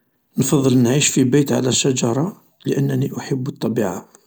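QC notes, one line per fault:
No audible faults found in this speech recording.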